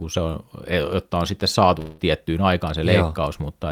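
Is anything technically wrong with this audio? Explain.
Yes. There is one fault in this speech clip. From 1.79 to 2.00 s, just after "e jotta on sitten", the sound stops moving forward. The last sound is drawn out as a fading buzz for about 190 ms, with no silent gap. Speech then resumes, but about 180 ms of it is simply gone. This is likely a long network dropout, where packets stopped arriving and the receiver stretched the last sound to cover the hole.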